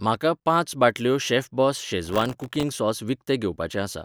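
Right after "म्हाका पांच बाटल्यो शेफबॉस", from 2.05 to 2.63 s, there's processor overload crackle: dozens of sub-millisecond buffers miss their deadline and drop to silence, giving gritty tearing over the speech.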